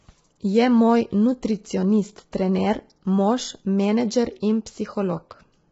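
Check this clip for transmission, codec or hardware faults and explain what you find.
Throughout the speech the voice sounds rough and grainy, with noise filling the gaps between harmonics and nothing above 7.7 kHz. This is likely low-delay AAC compression: short frames resolve pitch poorly, and heavy damage like this points to roughly 16 kbps AAC-ELD.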